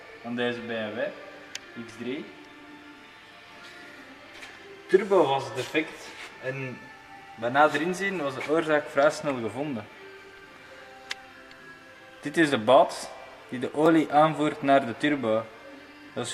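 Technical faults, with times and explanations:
13.86 s, block of digital silence: the signal drops to silence for about 0.67 ms, which fits a 32-sample block left unfilled, and returns with no fade on either side. The hole is far too short to be heard as a gap, so it comes across as a single tick. On the waveform it is a sliver of flat line with abrupt steps at both edges, and the spectrogram shows a thin vertical broadband stripe.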